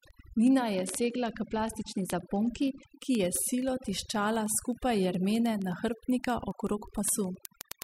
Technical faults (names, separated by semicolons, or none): overdone noise removal; word clock ticks; Bluetooth SBC bit pool drop